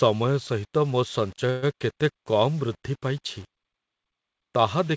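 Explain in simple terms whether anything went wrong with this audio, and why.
Two things went wrong in this speech recording.

The first runs through the whole clip. The speech has a grainy, gritty edge that shifts as the sound changes, and it is worst in the quiet parts. This is low bit depth without dither. The likely cause is that the audio was stored with too few steps of loudness, which fits about 7 bits, and each sample was simply rounded to the nearest step. No masking noise was added, so the rounding error follows the speech and is heard as roughness.

The second is a short stall at 1.50 to 1.64 s, right after "ସହିତ ମୋ". The sound briefly hangs as a fading buzz or hiss before the speech carries on. This is a call audio freeze. Its likely cause is delayed network packets, which left the receiver with nothing to play for a moment. The receiver filled the gap with about an eighth of a second of stretched-out sound. 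When the packets arrived, the speech picked up where it stopped, so nothing was lost. It just arrives a little later. The call line itself carries sound only up to 8 kHz, which is normal for this kind of call.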